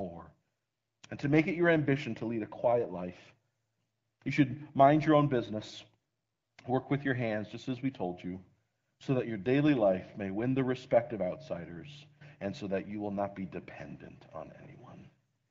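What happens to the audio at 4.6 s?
Nothing goes wrong at 4.6 s; the speech passes through the AMR wideband (HD Voice) codec cleanly at that point, with no fault to be heard.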